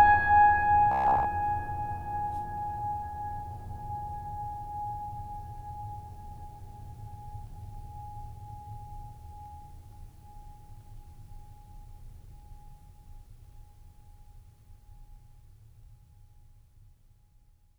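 Robotic sound from repeated short buffers runs from 0.92 to 1.26 s in this music clip. Across most of that span the music hardens into a rigid, metallic buzz at 66.7 Hz that still loosely tracks the underlying sound. The likely cause is audio arriving too late, with playback looping a fragment of about 15 ms while the real material is skipped. That loop length fits the 66.7 Hz pitch imposed on the passage.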